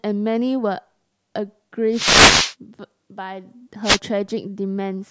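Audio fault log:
1.92–2.55 s and 3.83–3.99 s, wireless microphone noise hit: a swish of static cuts across the speech as the FM radio link fades through cancelling reflections and receiver noise rises. The hiss swelling and receding, rather than a hard digital mute or stutter, separates it from a dropout.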